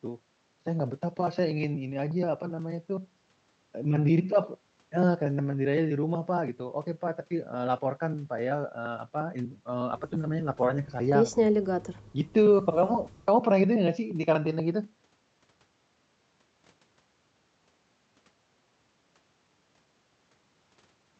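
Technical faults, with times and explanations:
No faults found; the speech carries the band limit of a normal call codec path, with content stopping near 8 kHz, consistent with Opus at a moderate bitrate.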